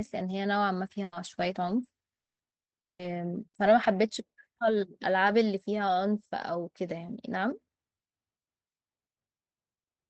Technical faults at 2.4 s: repeated packet loss (robotic sound); long network dropout

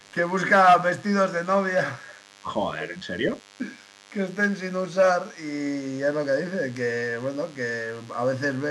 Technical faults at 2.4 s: DECT cordless phone buzz; speech suppressed in double talk

